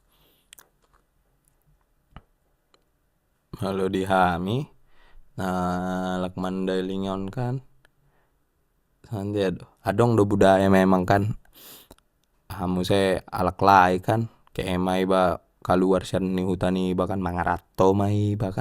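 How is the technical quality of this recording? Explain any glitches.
No glitches or technical faults can be heard here.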